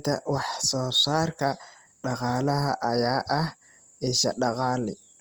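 Throughout the speech, a rough, grainy texture is plainly audible. Tonal parts turn noisy instead of swirling. The likely cause is Opus compression in music mode, at a rate fitting about 24 kbps. Starved bands get noise-filled. Bandwidth stays full, reaching 20.2 kHz.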